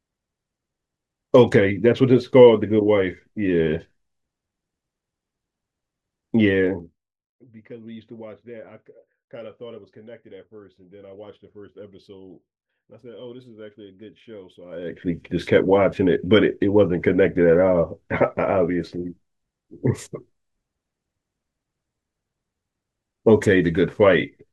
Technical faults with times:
6.59-7.38 zipper noise
14.63-15.06 zipper noise

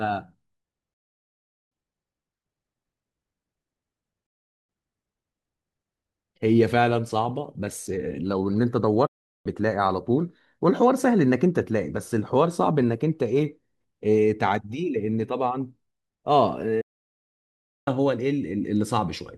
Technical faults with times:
0.93-1.72 digital broadcast dropout
4.26-4.69 digital broadcast dropout
9.06-9.46 digital broadcast dropout
16.81-17.88 digital broadcast dropout

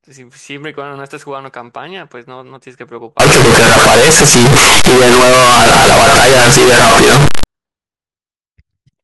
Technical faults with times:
3.20-7.44 float read as integer

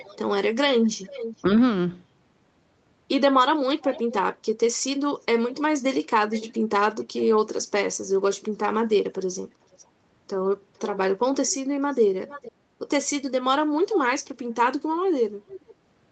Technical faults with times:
0.00-1.42 echo leak
3.81-4.23 echo leak
5.54-7.26 echo leak
9.10-9.83 echo leak
10.77-12.52 echo leak
13.94-13.98 echo leak
14.95-15.75 echo leak

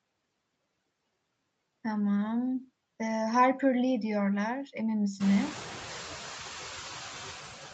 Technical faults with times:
0.00-7.74 noise suppressor artifacts

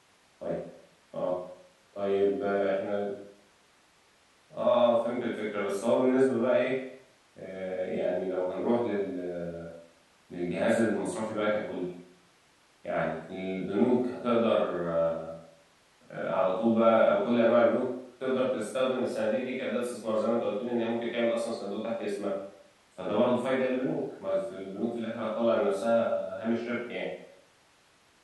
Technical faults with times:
none

